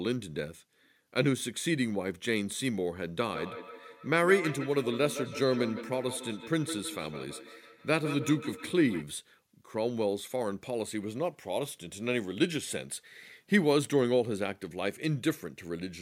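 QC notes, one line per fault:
3.26–9.08 s, feedback echo between two devices: a second device in the room replays the call and this microphone picks it up again, beyond the reach of the local echo canceller, so the speech returns roughly every 150 ms, thinner and ringing, peaking about 10 dB below the direct speech.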